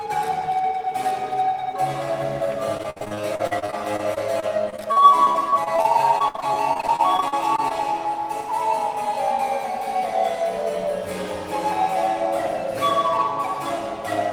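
Repeated packet loss hits this audio from 2.77 to 7.72 s: packets go missing or arrive too late, dozens of times in a row, and each hole is patched by extending the last stretch of sound. Nearly a second in total is filled this way, about a fifth of that span, with the longest gap 59 ms. Because one patch follows another so closely, the sound turns choppy and robotic, with small pieces dropped out.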